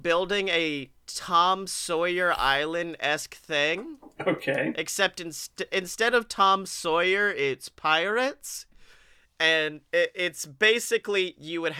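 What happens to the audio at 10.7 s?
At 10.7 s the speech carries on without any audible fault; the audio is intact at that moment.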